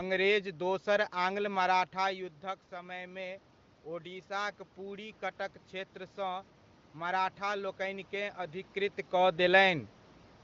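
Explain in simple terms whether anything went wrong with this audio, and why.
From 4.03 to 8.41 s you can hear automatic gain rising: the level dropped, so the system slowly turned itself up, lifting voice and room noise together, just before "अधिकृत कऽ".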